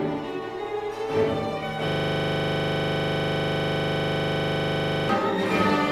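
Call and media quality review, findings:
System hang loop, 1.88 to 5.09 s. Audio locks onto one 40 ms slice and replays it back to back for over 3 s, so you get a steady 25 Hz buzz instead of the stuttery machine-gun sound. Probable component: driver or host stall while the audio hardware keeps cycling its ring buffer, which points to roughly a 40 ms buffer. Playback recovers after 5.09 s.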